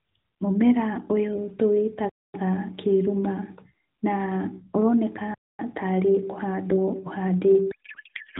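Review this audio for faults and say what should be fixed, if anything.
Gap between chunks at 2.09–2.34 s and 5.34–5.59 s (before "tarĩ kũhandwo"): hard-edged 250 ms silences every 3 s, chunks played back late or padded. Prevent by queuing each chunk seamlessly.

Codec payload misread from 7.72 s to the end: octet-aligned AMR read as bandwidth-efficient turns speech into garbled warble. Prevent by matching payload format on both ends.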